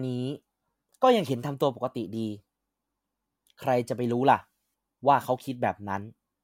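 A speech recording whose signal carries no audible technical fault at any point.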